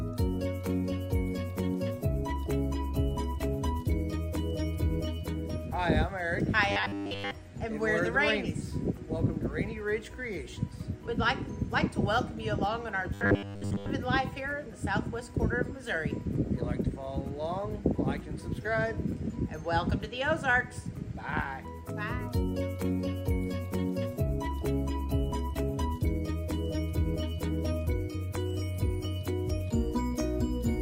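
Robotic sound from repeated short buffers at 6.72–7.31 s and 13.14–13.90 s: a rigid 100 Hz metallic buzz, likely from a roughly 10 ms buffer replayed in place of most of the incoming audio.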